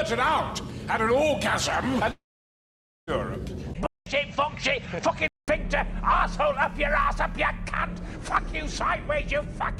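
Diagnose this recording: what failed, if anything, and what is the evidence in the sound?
Long network dropout, 2.11 to 3.10 s. About 0.96 s of sound goes missing. The receiver first stretches the last sound it had into a short fading buzz, then leaves roughly 0.87 s of near silence before the audio resumes further along, with the gap's content never recovered. This is a network-stage fault, likely a run of packets that never arrived, with loss concealment giving up once there was nothing left to extrapolate from.

Input switched to a poorer device, 3.86 to 5.48 s. A 200 ms silence marks the switch. From there the sound turns duller, with nothing above 8.2 kHz, and a new background noise sits well below the signal, while the overall level stays about the same. The narrower band and the different noise floor point to the driver or device-routing stage, likely the system moving its capture to another microphone or a headset call profile mid-recording.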